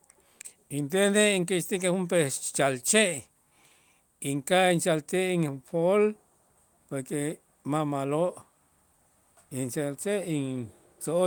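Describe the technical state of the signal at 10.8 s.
At 10.8 s the signal is intact, with no audible technical fault.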